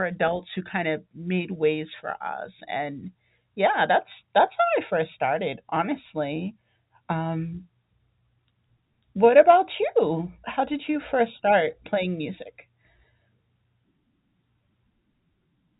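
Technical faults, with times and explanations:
No technical faults are present in this clip; the speech comes through the G.711 telephone path with nothing above 3.8 kHz, as that format allows.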